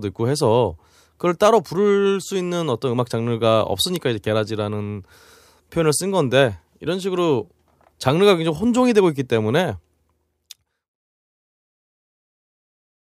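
A bit error spike at 3.96 s interrupts this speech recording as a single sharp tick. One sample's value has been corrupted, most likely by a flipped bit in memory or on a digital link, so the waveform jumps by a power of two for that one sample and snaps straight back. The result is a broadband click that has nothing to do with the speech around it. The smooth fade-out that begins around 9.5 s and ends at 10.97 s is deliberate editing.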